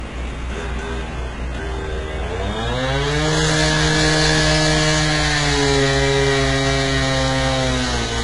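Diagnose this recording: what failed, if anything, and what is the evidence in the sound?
Throughout the recording the treble sounds bright but synthetic: sharp, noisy content comes out gritty and metallic, with a lisping edge, and nothing at all reaches above about 11.1 kHz. The damage is heavy and points to the codec stage, most likely HE-AAC compression at a very low bitrate, around 12 kbps. Only the lower band is truly coded; the upper band is rebuilt by copying lower content upward under a coarse envelope, so its harmonics don't match the original.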